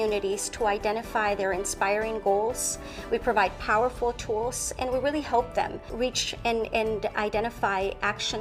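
No technical faults can be heard anywhere in the signal.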